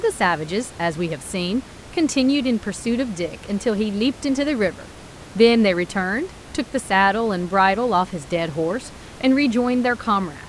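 No technical faults can be heard in the speech signal, and the only background is the room's own noise, sitting about 20 dB below the speech.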